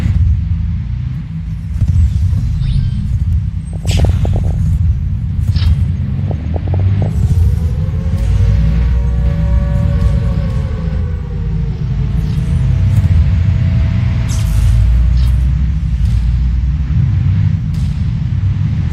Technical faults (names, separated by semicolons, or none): DAB burbling; doubled audio track